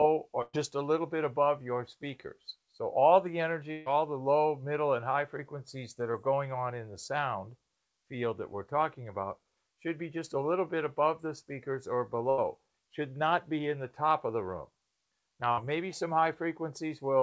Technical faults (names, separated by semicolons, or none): burst of packet loss; short concealed packet loss